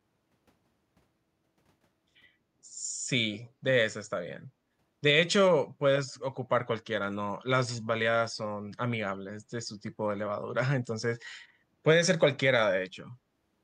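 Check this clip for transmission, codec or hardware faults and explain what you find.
One fault turns up in the speech. Echo leak, 3.35 to 3.45 s: a brief, faint copy of the speech returns about 200 ms late, roughly 20 dB below the direct voice. This is likely loudspeaker sound at the far end reaching its microphone and slipping past an echo canceller that failed to remove it. It is heard as a ghost trailing the voice.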